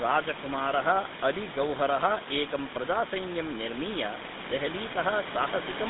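From start to finish the speech has gone through the GSM full-rate codec, and it's plainly audible. The coder rebuilds each sound from a vocal-tract model driven by a sparse, evenly spaced pulse train, so everything comes out buzzy and gravelly, which fits the 13 kbps full-rate coder. The line band runs from about 150 Hz to 3.7 kHz, so there's no real low end or air. The room noise sits about 10 dB below the speech.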